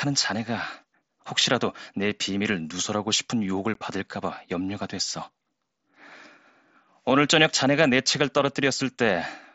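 Speech carried over a wideband Bluetooth headset link, with a single instance of unconcealed Bluetooth headset packet loss at 3.74 s. A hole of about 15 ms opens in the speech with hard edges, which fits two lost packets of a few milliseconds each with silence in their place. Concealed loss would be smeared or filled in. This gap is left bare, and it is too brief and abrupt for a signal dropout. The mSBC band limit at 8 kHz can be heard throughout, with light graininess on loud sounds.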